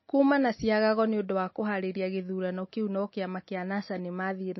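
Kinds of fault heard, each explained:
MP3 compression: The audio was likely squeezed through an MP3 encoder starved of bits, and the sound fits a rate of roughly 27 kbps. Short of data, the encoder threw away the treble outright, so nothing survives above 5.8 kHz. It also zeroed weaker frequency lines, which flicker in and out from frame to frame. The damage is plainly audible across the whole speech clip as a dull, band-limited tone with a watery, swirling texture and smeared attacks.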